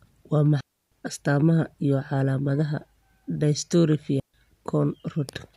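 At 0.61 s the speech drops out for 0.31 s before "astamaha iyo calaamadaha", and again at 4.20 s for 0.14 s: digital wireless dropouts, where the receiver loses too much data and mutes fast. Unlike analogue RF dropouts, each gap is clean near-silence with no noise burst either side.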